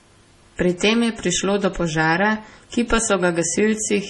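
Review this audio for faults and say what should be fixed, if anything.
The speech was likely squeezed through MP3 compression at a very low bitrate throughout, which fits about 32 kbps. The encoder cut everything above 11.3 kHz and dropped weak frequency lines frame to frame, so the sound is dull, watery and swirling, with metallic chirps on s sounds. Keep the master uncompressed or encode at a much higher bitrate.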